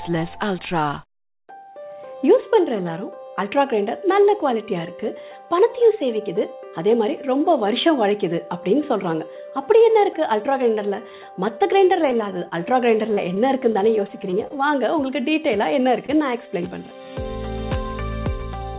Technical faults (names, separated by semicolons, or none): short concealed packet loss; repeated packet loss (robotic sound); short stall from a late packet